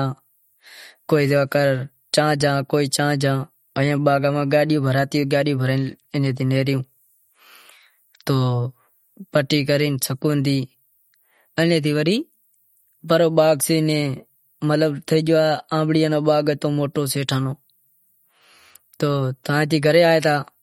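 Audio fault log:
throughout, MP3 compression: the speech has a plainly watery, swirly edge, and nothing at all comes through above 16.6 kHz. That's likely a bit-starved MP3 encode, fitting something around 48 kbps, with weak frequency lines dropping in and out frame to frame.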